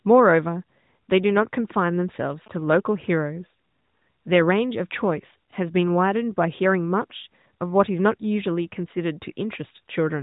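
From 2.09 to 2.81 s, GSM signalling bursts break into the speech: a galloping dit-dit-dit of short buzzes at about 217 Hz, roughly 25 dB below the speech. A nearby 2G phone's radio pulses are being rectified in the audio circuit.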